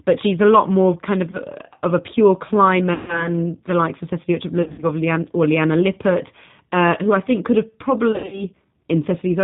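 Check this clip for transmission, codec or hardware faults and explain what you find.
The speech clip has two faults: it passes through the G.729 codec, and it suffers VoIP packet loss concealed by the speech codec at four points.

G.729 codec, throughout: this 8 kbit/s coder rebuilds speech from a filter, a pitch predictor and sparse pulses, with nothing above 4 kHz. The result is clearly rough, muffled and synthetic.

VoIP packet loss concealed by the speech codec: when packets go missing, the decoder extrapolates its last pitch and filter at falling gain, so the audio smears into a fading buzz or coloured noise, and the voice stays weak or distorted for a short while afterwards. This happens four times:
at 1.31 to 1.40 s, after "a lot more kind", with about 20 ms missing;
at 2.94 to 3.29 s, between "of a pure" and "the likes of", with 140 ms missing;
at 4.62 to 4.85 s, with 140 ms scattered over 200 ms;
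at 8.12 to 8.45 s, after "I think could have", with 160 ms scattered over 200 ms, the longest run being 80 ms.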